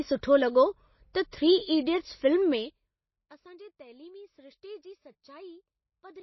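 A low-bitrate encode, likely MP3, runs through this whole speech recording, and the codec damage is plainly audible. The content is consistent with a bitrate around 24 kbps, too few bits for the encoder to keep every frequency line it needs. Weak lines are zeroed and come and go from frame to frame, which gives the speech a watery, swirling texture. The encoder has also removed the treble: nothing is left above 5.8 kHz, so sibilants sound dull and clipped. At 1.13 s the same transform coding causes pre-echo. A sharp attack sits late in a coding block, and the quantisation noise meant for that loud onset is spread back across the block into the quiet just before it. The result is a short smear of hiss, about 16 ms long, ahead of the attack, which then lands softer and less defined than it should. From 2.51 to 3.0 s there is zipper noise. The gain drops by roughly 25 dB, but it moves in small discrete steps rather than along a smoothed ramp, at something like 200 steps a second. 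Each step puts a tiny discontinuity into the waveform. Together these steps form a fast ticking, zipping texture on top of the speech for as long as the level is falling.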